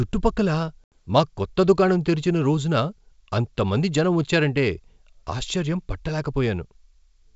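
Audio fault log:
0.84–0.97 s: packet loss on an ADPCM call, an abrupt silent gap of 80 ms (a few packets) before "మా కొత్త దుకాణం తెరిచిన", which then resumes slightly distorted until the decoder's predictor resynchronises.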